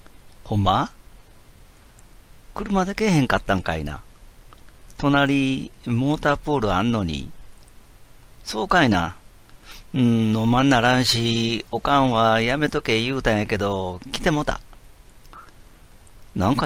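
No technical faults can be heard anywhere in this recording.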